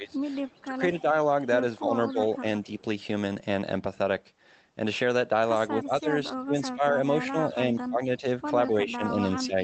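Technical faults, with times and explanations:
0.0–0.19 s, 0.64–1.06 s, 1.79–2.84 s, 5.76–6.94 s, and 7.32 s to the end: speech suppressed in double talk. The talker keeps getting ducked in patches. The dips reach about 15 dB in the first two stretches, a milder 10 dB or so around 2 s, a deep 25 dB between 5.76 and 6.94 s, and about 15 dB again across the final section. This is likely the echo canceller losing track of the talker versus loudspeaker echo while both sides spoke, so it turned everything down.
0.52–0.64 s and 2.27–2.35 s: echo leak. Two brief, very faint ghost copies of the talker poke through, roughly 35 to 40 dB under the main speech and trailing it by 252 ms. They're short scraps rather than a sustained echo. The likely cause is that the far end is on a loudspeaker and its echo canceller didn't fully scrub its mic pickup, so a bit of the returned signal got sent back.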